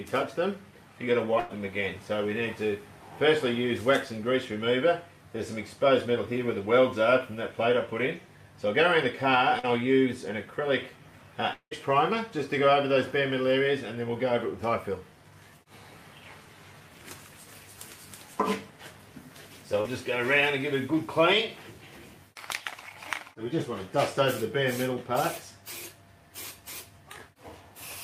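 At 1.39 to 1.51 s a burst of packet loss removes about 100 ms of audio. The receiver fills the hole by extending the last sound and fading it, so a held buzz or hiss decays before the audio resumes, with that stretch gone.

At 9.59 to 9.65 s a short concealed packet loss drops about 40 ms. The decoder patches it by continuing the preceding sound and blending back in, leaving a brief smear or wobble.

At 11.53 to 11.73 s the sound extends into a fading buzz or hiss for most of about 180 ms, then goes silent for roughly 80 ms before returning further on. This is likely a long network dropout, where nothing arrived for a stretch.

At 19.81 to 19.86 s another short concealed packet loss of about 40 ms leaves a similar quick smear where the concealment bridges the gap.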